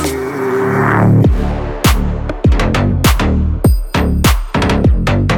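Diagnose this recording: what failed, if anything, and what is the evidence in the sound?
Nothing in the sound points to a failure at any stage, from analogue wiring through converter, buffer, codec, network, storage or playback.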